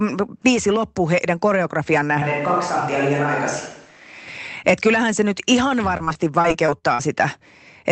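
From 2.22 s to 4.27 s the sound turns roomy and hollow, with thinner bass, and room noise rises to roughly 30 dB below the speech. The loudness barely changes. The likely cause is a switch to a distant microphone: the close mic's signal dropped out and a farther one carried the audio. Added reverb or an EQ change would not do this. What sets it apart is the abrupt change in and back out, together with the jump in background noise.

From 5.97 s to 7.01 s, repeated packet loss gives a choppy quality with pieces missing. A run of eight short holes, the longest 46 ms, loses about 200 ms of audio. Each hole is filled by stretching the last sound forward, so about a fifth of that second is patched sound. A single dropout would leave one clean gap. Here the holes recur close together, and that choppy patching across the whole stretch is the mark of this fault.

Throughout, the top end stops around 8 kHz, as expected from the call codec.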